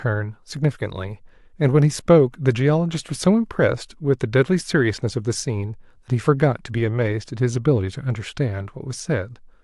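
No technical faults can be heard anywhere in this speech recording.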